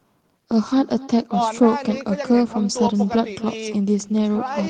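From start to finish, every phrase is trailed by a faint, thin copy of itself arriving roughly a third of a second later, sitting about 18 dB below the speech. This is echo with no canceller: the far end is playing the call through a loudspeaker, its microphone picks that sound back up, and nothing strips it out. The speech therefore returns after the network round trip as a quieter shadow.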